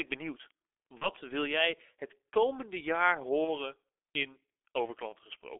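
Throughout, the speech is muffled and hoarse with smeared consonants and nothing above 3.5 kHz, which fits the G.723.1 codec running near 6.3 kbit/s with slow voice-model updates.

At 0.98 to 1.11 s, 3.44 to 3.57 s and 5.10 to 5.15 s, the speech briefly turns to a fading buzz or coloured noise. Each point fits a single lost 30 ms frame handled as VoIP packet loss concealed by the speech codec, with the decoder extrapolating from its last frame.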